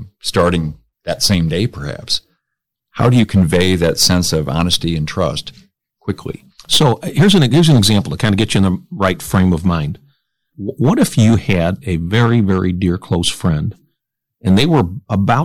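Hard clipping runs throughout the speech, from start to finish. The signal is driven about 7 dB past what the chain can pass, so roughly three percent of samples are sliced flat at the ceiling, adding high harmonics heard as a harsh crackle on louder syllables.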